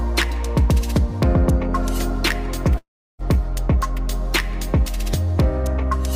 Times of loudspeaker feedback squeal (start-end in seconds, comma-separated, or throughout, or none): none